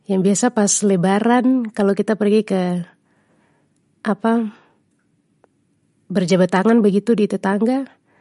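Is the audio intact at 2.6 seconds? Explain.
No. At 2.6 s, as across the whole clip, the speech carries MP3 compression damage, likely from a low bitrate near 48 kbps. Nothing survives above 11.2 kHz, and weak frequency lines flicker between frames, giving a watery swirl that a plain low-pass filter would not produce.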